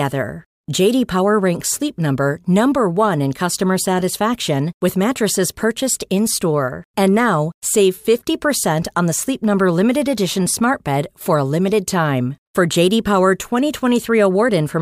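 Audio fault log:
No fault is heard in this speech clip.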